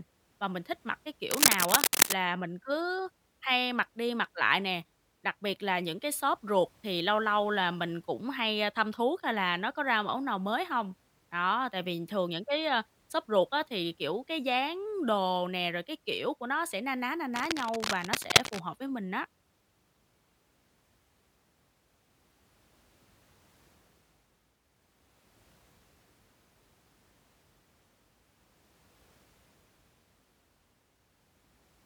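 Speech with cable scratch noise twice: 1.31 to 2.13 s after "mình thích mặc cái", slightly louder than the voice, and 17.34 to 18.60 s after "sẽ na ná na", about level with it. Both are likely a worn cable or connector being moved. A spectrogram shows dense, ragged broadband smears, and the waveform shows irregular spiky bursts.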